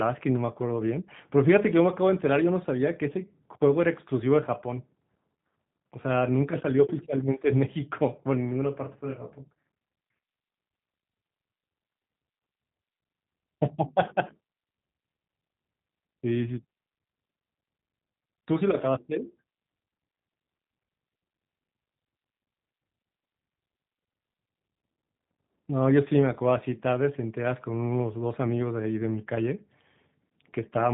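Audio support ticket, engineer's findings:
G.729 codec damage, throughout. Speech band-limited, nothing above about 3.8 kHz. Plainly audible roughness and synthetic edge from filter-plus-pulse rebuilding of each 10 ms frame, consistent with G.729A at 8 kbit/s somewhere in the VoIP path.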